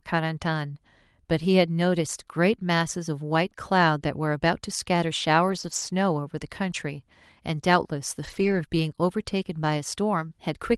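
Lost packets rebuilt from error correction at 5.47–5.81 s and 8.23–8.61 s: dropped packets were replaced by low-bitrate copies, leaving no gap, but these stretches sound rougher and noisier.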